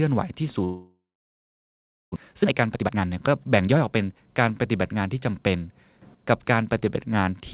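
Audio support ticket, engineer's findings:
Long network dropout, 0.64 to 2.18 s. Audio smears into a fading buzz, then about 1.1 s of silence. Likely a packet outage on the network leg. Receiver concealment ran out, and roughly 1 s of sound never plays. Delay grew by about half a second.

Jitter buffer speed-up, 2.31 to 4.17 s. Speech runs fast and hurried at unchanged pitch, near 126% speed. Buffer was overfull after the outage. Receiver trimmed pitch-period slices repeatedly, dropping about half a second to recover latency.

Sudden gain jump, 6.02 to 6.15 s. Speech and background noise step up together by about 12 dB, with no ramp. Likely a digital gain change applied sample-to-sample, such as a level setting or bit shift. A click at the step is possible. The band stays capped at 4 kHz throughout, consistent with a 64 kbps G.711 mu-law call leg.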